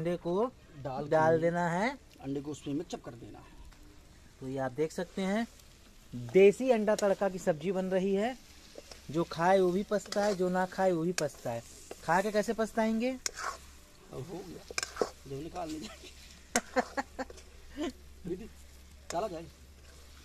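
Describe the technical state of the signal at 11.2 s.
At 11.2 s the signal is intact, with no dropout, distortion, glitch or other technical fault present at that point.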